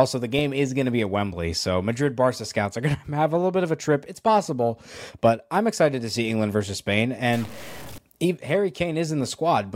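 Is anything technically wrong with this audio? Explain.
Yes. From 7.33 to 7.98 s there is harsh, buzzy distortion, likely a stuck bit whose fixed error is about -35 dBFS. Unlike clipping, it hisses through quiet moments too.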